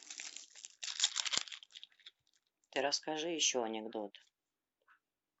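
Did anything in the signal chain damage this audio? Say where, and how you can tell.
No, nothing along the chain seems to have left a mark on this speech recording, so there's no damaged stage to point to.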